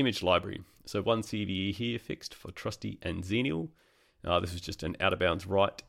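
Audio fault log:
4.90 s, corrupt frame decoded: Just after "this was just", a brief, faint chirp or blip, peaking around -45 dBFS, where a couple of damaged compressed frames were decoded anyway. Their misread gains and codes put energy at the wrong frequencies for that instant.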